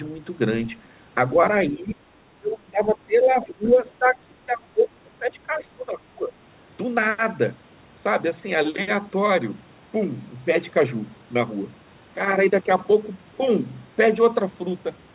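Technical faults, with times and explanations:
1.72–2.06 s and 2.4–6.37 s, speech suppressed in double talk: the talker dips by up to about 20 dB in pieces, likely because the echo canceller mistook overlapping talk for echo, unlike a steady network dropout.
3.64–3.7 s, other side's voice leaking through: a brief second voice about 25 dB below the talker, likely loudspeaker echo the canceller missed, distinct from background noise.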